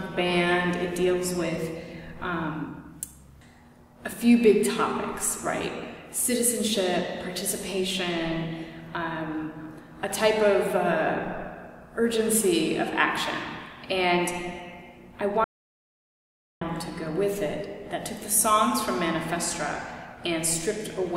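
At 15.44 s the sound stops abruptly, mid-flow, and the clip falls into total silence, with no background or room tone underneath, until it resumes just as suddenly at 16.61 s. About 1.17 s of material is simply missing. This is an audio dropout to silence, likely caused by the input signal being lost for that stretch, through a disconnect, a broken link or an accidental mute, while the recording chain kept writing silence.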